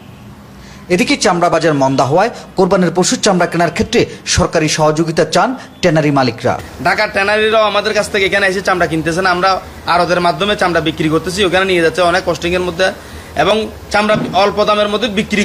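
Stream segments, cut roughly every 6 seconds, carry overlapping time stamps, so the player discards about 40 ms of genuine audio at each join: 1.54 to 1.58 s, 7.52 to 7.56 s and 13.51 to 13.54 s. The waveform jumps there, giving a regular click or tiny skip.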